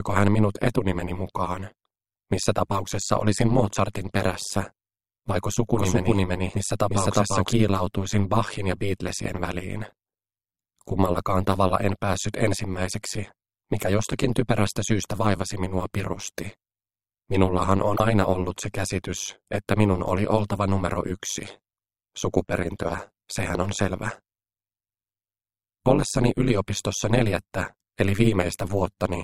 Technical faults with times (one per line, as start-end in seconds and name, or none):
0.00-29.24 overlap-add ripple
5.75-7.53 doubled audio track
17.96-18.00 broken MP3 bit reservoir